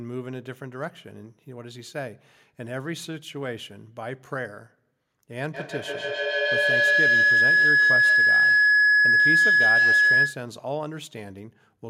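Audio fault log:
5.54–10.5 s, feedback howl: a tone of around 1.5 kHz swells to about 12 dB above the speech, with the loop repeating roughly every 150 ms. A microphone is picking up a loudspeaker on the same call, and each pass round that loop adds level at the frequency it favours.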